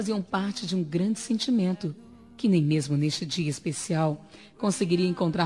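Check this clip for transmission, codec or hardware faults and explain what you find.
Nothing here stands out as a fault; the audio runs along steadily with no dropouts, glitches or damage to flag.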